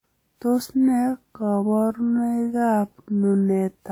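A speech clip with a swirly, hollow, smeared quality throughout that points to generation loss, likely from around ten successive WMA 1 encodes at 128 kbit/s. A spectrogram shows scattered holes and blurred onsets below a ceiling near 20.1 kHz. From 1.0 s to the end, the pace abruptly drops to about two-thirds speed while pitch holds, so the speech drags. This is likely a time-stretched section, where short repeated grains stretch the waveform.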